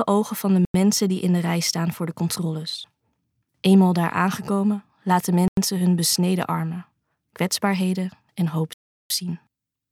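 The audio has three blocks of digital silence, at 0.65 to 0.74 s, 5.48 to 5.57 s and 8.73 to 9.10 s. Each drops abruptly to silence. The first two last 93 ms (4096 samples) and the last 372 ms (16384 samples), which fits output buffers left unfilled in time.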